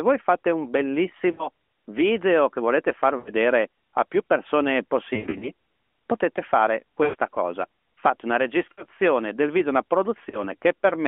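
You get six spots of lost AMR speech frames through this narrowband call speech: 1.32–1.48, 3.18–3.32, 5.14–5.51, 7.04–7.15, 8.72–8.84 and 10.30–10.44 s. Radio errors knock out frames, so the decoder keeps replaying the last good pitch and vocal tract shape at dropping gain. Each one comes across as a smeared, warbly stretch that sags toward silence before the voice returns a bit rough. The 5.14 s one is patchier, a broken cluster across about 0.3 s.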